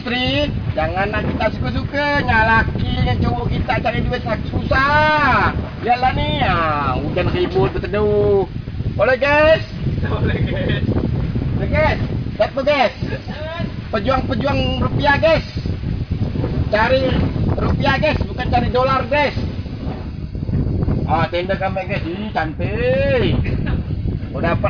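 No technical faults can be heard anywhere in the recording.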